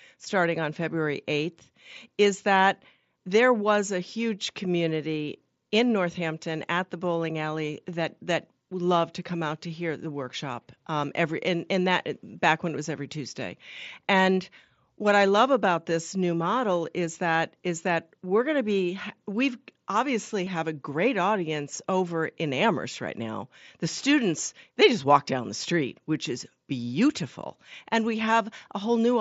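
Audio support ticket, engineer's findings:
Concealed Bluetooth headset packet loss at 5.13 s (after "there was a huge"), 15.9 s, 20.45 s (between "to be we've obviously" and "have a great audience") and 27.4 s (before "and we"). Short patched gaps, about 7.5 ms at the first two and 15 ms at the last two, which fits one and two lost frames. The receiver filled each with a copied stretch of the preceding waveform. The wideband mSBC headset path carries the speech up to 8 kHz with light codec grain.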